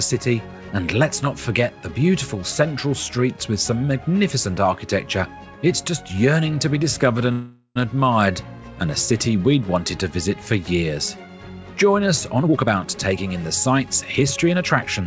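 At 7.32 s there's a call audio freeze running to about 7.78 s. The last bit of sound gets stretched into a buzzy tail that fades, with roughly 60 ms of near silence before the audio picks up again exactly where it left off. So about 0.44 s of gap has been slipped in and nothing's actually lost. The likely cause is packets stalling in transit until the jitter buffer ran dry.

Then from 12.42 s right through to about 15.01 s you get a jitter buffer speed-up. Having built up extra delay, the receiver trims it back by snipping out tiny pitch-period-sized chunks over and over, taking out roughly 0.4 s in total. The audio plays at about 115% speed but keeps its pitch, so it comes across as noticeably rushed. Throughout, there's nothing above 8 kHz, which fits a G.722 call codec at 64 kbps.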